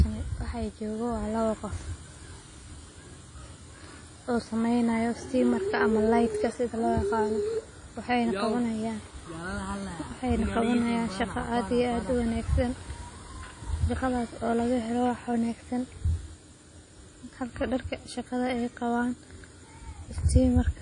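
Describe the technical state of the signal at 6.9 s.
At 6.9 s the speech carries the same damage heard across the whole clip, most likely WMA compression at a low bitrate, with a sound that fits roughly 32 kbps. Quantisation noise smears over tens of milliseconds, so the speech rings and turns washy, with a hiss that swells and fades with the voice. A spectrogram shows a hard ceiling at 10.1 kHz, with nothing above it, and patchy, blocky holes where weak components were zeroed.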